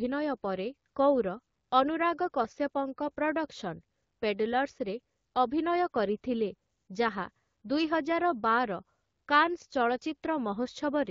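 Nothing goes wrong in this stretch of speech, which comes through an AMR wideband (HD Voice) link at 12.65 kbit/s, the rate where that codec keeps speech clear.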